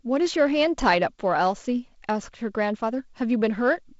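Nothing goes wrong in this speech clip: it's just ordinary G.722 wideband telephone coding at 48 kbit/s, with the sound stopping at about 7.7 kHz and only a light touch of the codec's own coloration.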